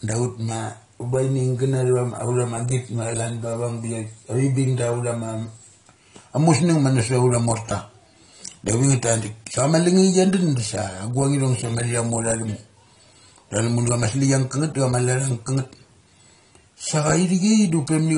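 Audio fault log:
Throughout: AAC compression, likely from AAC-LC coding. The speech has nothing above 10.1 kHz, and the codec damage is plainly audible, which fits a low bitrate around 32 kbps. A plain low-pass filter would only remove the top band without adding that damage.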